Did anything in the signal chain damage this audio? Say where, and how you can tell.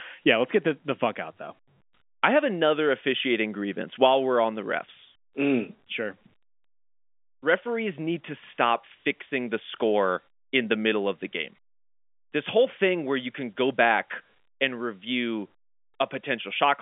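No, nothing stood out on listening; the speech comes across as an ordinary telephone line, with the narrow band of G.711 A-law telephone coding and nothing above roughly 3.7 kHz.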